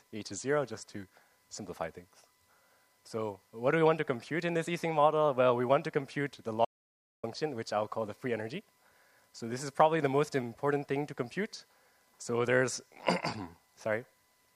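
The audio has an audio dropout to silence from 6.65 to 7.23 s. About 0.58 s drops to total silence with no room tone, likely from lost input.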